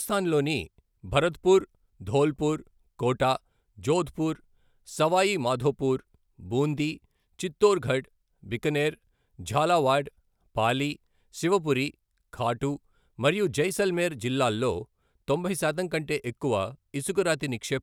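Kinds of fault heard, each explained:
No faults turn up anywhere in this speech recording, so there's nothing to list here.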